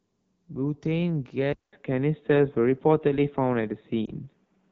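AMR wideband (HD Voice) codec damage runs through the whole speech clip. The codec models the vocal tract and drives it with pulses up to 6.4 kHz, then fills the top band with shaped noise. Here the coding is plainly audible: the speech sounds rough and raspy. That degree of coarseness points to one of the lowest AMR-WB rates, around 8.85 kbit/s, where too few bits remain to capture fine detail.

An input switch to a poorer device occurs at 1.53 s and lasts to the end. After a silence of 200 ms the sound comes back duller and boxier, with nothing above 3.8 kHz, so the airy top of the wideband signal disappears. The level drops or jumps by a few decibels and a faint new noise floor appears, far below the speech. The likely cause is the system moving its input to another microphone or to a headset's call profile partway through the recording.

Lost AMR speech frames occur from 4.06 to 4.10 s, where one 20 ms frame failed its check. 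The decoder filled the gap by reusing the last good pitch and vocal tract settings at reduced gain. The result is a brief dip or warble. Afterwards the speech returns weak or rough for a moment before the decoder settles.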